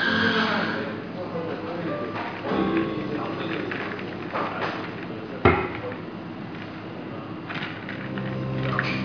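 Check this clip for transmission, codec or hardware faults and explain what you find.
Nothing in the audio stood out as a problem on listening.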